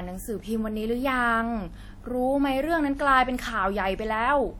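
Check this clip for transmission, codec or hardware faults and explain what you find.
One codec fault is present, running through the whole speech clip: likely WMA compression. Long transform blocks smear quantisation noise across tens of milliseconds. The result is ringing, a washy texture and hiss that breathes with the speech. The damage is plainly audible, and the top end stops near 19.6 kHz, which fits a 48 kbps stream. Unlike dropouts, the smearing is continuous rather than in gaps.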